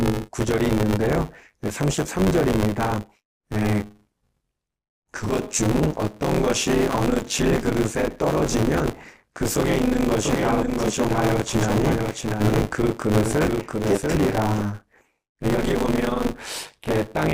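Buffer tearing runs through the whole recording as a rattling, robotic buzz at 100 Hz that rides on the speech and drops away in the pauses. The writer and the reader of the playback ring buffer have drifted and now cross inside every 10 ms period, so roughly two fifths of each period carries audio from about 20 ms earlier, butted against current audio with hard joins. On a waveform the joins show as steps repeating every 10 ms. A spectrogram shows evenly spaced vertical streaks and a comb of sidebands at 100 Hz spacing, visible only where there is signal.

From 10.23 s to 14.59 s a doubled audio track appears. A second full-band copy of the speech trails the original by around 0.7 s at about 5 dB lower, with no reverberant tail or room colouring. This is likely a second capture taken through a slower path and mixed back in. It starts and stops abruptly at those two times. On a spectrogram the speech patterns appear twice, the fainter set offset to the right by a constant amount. 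The waveform shows the same envelope shapes repeated at that fixed lag.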